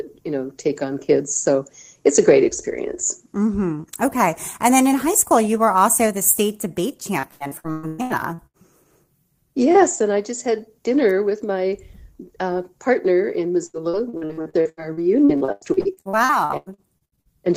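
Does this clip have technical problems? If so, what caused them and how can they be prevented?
Yes. The speech shows repeated packet loss (robotic sound) from 7.19 to 8.57 s, with nine gaps (longest 114 ms) patched over nearly half that stretch, and from 13.66 to 17.28 s, with 28 gaps (longest 93 ms) covering about a third. Each lost or late packet was filled by stretching the preceding sound, so the audio turns choppy. A single dropout leaves one hole, but these holes recur in quick succession. A more stable network connection or a larger jitter buffer would prevent it.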